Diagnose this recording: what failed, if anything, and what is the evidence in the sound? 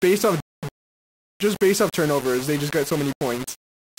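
Sounds like a sample-format conversion fault: likely low bit depth without dither, with the audio rounded to 4 bits. Across the whole speech clip, quiet parts turn gritty or sputter, and the grainy error follows the waveform, sitting only about 15 dB below the speech.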